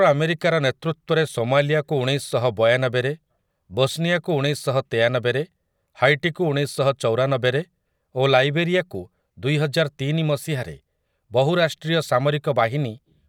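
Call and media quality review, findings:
Nothing to flag here; the speech comes through without any audible fault worth a ticket.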